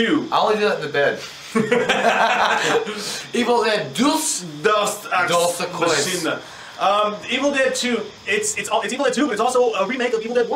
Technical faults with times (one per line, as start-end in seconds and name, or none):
8.50-10.55 time-stretched section